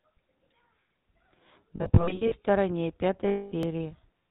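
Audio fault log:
throughout: GSM full-rate codec. Audible across the whole clip is a buzzy, gravelly roughness with nothing above 4 kHz. The speech is rebuilt from a vocal-tract model driven by regularly spaced pulses, and only every third excitation sample is kept. That gives the coarse, rasping texture, which fits the 13 kbps full-rate GSM codec. It differs from a plain low-pass or narrowband line because the grit sits inside the voice itself, not just a loss of treble.
1.76 to 2.35 s and 3.28 to 3.53 s: lost GSM frames. In the first stretch, about 320 ms of frames is missing, scattered over 560 ms in short runs, the longest roughly 70 ms. In the second, about 240 ms is lost. Each gap is filled by repeating the last good frame, so the sound hangs as a rough, metallic ring instead of going silent. That sustained ring separates it from a buffer dropout.
1.86 s and 3.63 s: dropped buffer (overrun). 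There is an abrupt jump forward and no silent gap, losing roughly 5 ms and 15 ms of audio. The two sides of the missing piece butt directly together, likely because samples were overwritten before the program collected them. Unlike the frame losses, nothing is held or smeared. The sound simply skips.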